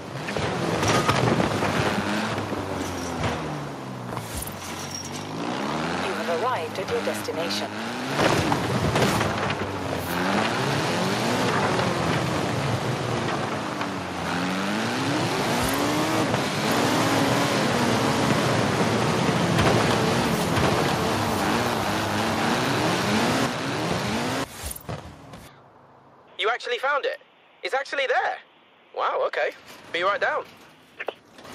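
From 16.68 s to 25.48 s the sound carries a doubled audio track: a second, full-band copy runs roughly a second behind at about the same level, most likely from a slower capture path or an edit leaving two copies out of step. It enters and leaves abruptly, with no decay or room colour. On a spectrogram the whole pattern appears superimposed on itself, shifted about one second; the waveform thickens and its envelopes overlap.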